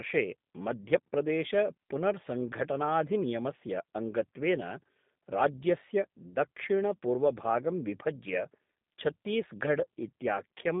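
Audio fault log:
Throughout, G.729 codec: speech sounds rough and synthetic, rebuilt from filter, pitch and pulse parameters at what fits 8 kbit/s; spectrogram shows nothing above 3.8 kHz, band roughly 150 Hz–3.6 kHz.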